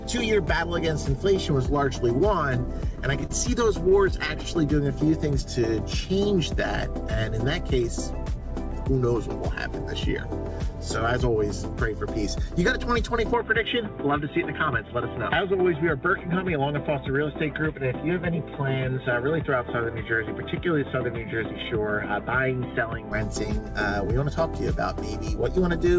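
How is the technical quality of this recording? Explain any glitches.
The recording has three glitches, all in the first 23 seconds: a run of small dropouts, a brief slow-down, and a long stretch where the sound turns duller.

From 2.96 to 4.57 s there are scattered short gaps. Packets arrived late or not at all, about seven of them, and the receiver filled each hole by extending the preceding sound. The patches total roughly 100 ms, none longer than about 30 ms, and they are heard as small ticks and smears.

From 4.83 to 5.60 s comes a jitter buffer slow-down. With its reserve running short, the receiver repeated tiny slices of the waveform to gain 51 ms. Playback drops to 95% speed at unchanged pitch, so the sound drags slightly.

From 13.34 to 23.12 s the input likely switched to a poorer device. There is no gap and no level change at the switch. The bandwidth narrows from the 8 kHz the G.722 call path carries, which gives a dull, boxy tone. 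A new noise floor also appears, about 40 dB under the signal.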